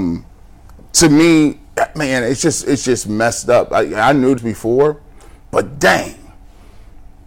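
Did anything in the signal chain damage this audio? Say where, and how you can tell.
Yes. The converter or sample-format stage was overdriven by about 11 dB throughout, so hard clipping flattens roughly 2% of samples, adding crackling harshness on speech peaks.

Playback suffered a CD skip at 4.38 s, between "up I I knew" and "before but". The laser jumped tracks, giving a tick, a few milliseconds of mute, and an abrupt jump.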